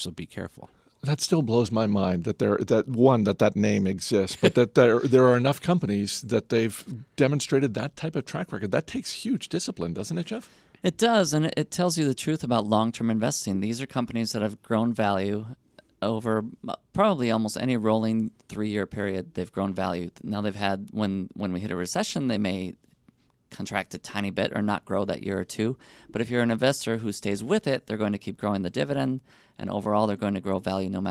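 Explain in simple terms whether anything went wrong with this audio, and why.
Nothing went wrong with this audio, because there is no fault anywhere in it.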